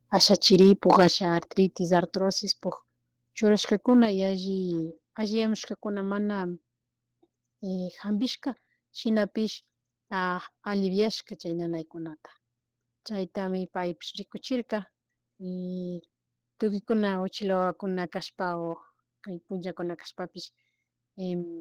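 From 0.22 to 1.08 s the speech shows microphone overload: the loudest syllables have their peaks flattened, producing a harsh, crackling edge. The signal is pushed roughly 5 dB beyond full scale, and a few percent of samples in that stretch are cut off at the limit. The likely cause is an input gain set too high, so the converter runs out of headroom and squares off the waveform tops.

Immediately after, at 1.08 s, the level drops abruptly by about 6 dB, voice and background together, in a single step. This is microphone volume stepped down, likely the call software reacting to the clipping by cutting the device's input volume. A second identical step of about 6 dB follows at 4.05 s, leaving the speech noticeably quieter from that point with no further overload.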